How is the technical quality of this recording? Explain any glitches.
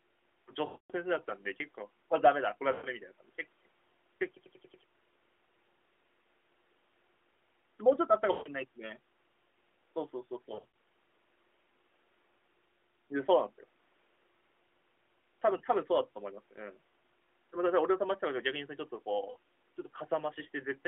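The recording is narrowband mobile-call audio, limited to roughly 250 Hz to 3.4 kHz with light codec colouring consistent with AMR-NB at about 12.2 kbps. It is marred by six dropouts from lost AMR speech frames.

These occur at 0.66–0.92 s, 2.72–2.87 s, 8.32–8.49 s, 10.54–10.65 s, 15.58–15.61 s and 19.30–19.36 s. The 10.54 s event is a scatter of short losses spread over about 200 ms, none longer than 40 ms. When frames fail their checksum, the decoder repeats the last good pitch and vocal-tract parameters at falling gain. The single lost frame at 15.58 s gives a brief warble or dip. The 240 ms loss at 0.66 s stretches the sound before it fades toward silence, and the audio returns weak or rough.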